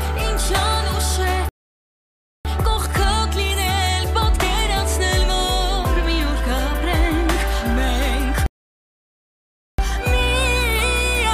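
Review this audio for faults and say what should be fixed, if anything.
Two rebuffering stalls interrupt the sound, from 1.49 to 2.45 s and from 8.46 to 9.78 s, adding about 0.96 s and 1.32 s of silence. Each time, playback drained its downloaded audio, halted, and resumed exactly where it left off once more data arrived. Unlike a dropout, nothing is skipped; the timeline simply stretches. Preventing this means building a larger playback buffer before starting and using adaptive bitrate to keep downloads ahead of playback.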